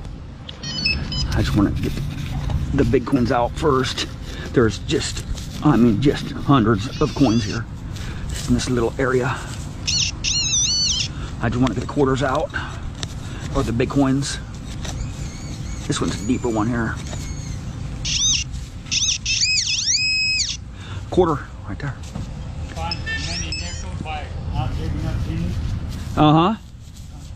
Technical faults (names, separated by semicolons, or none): damaged data in a compressed stream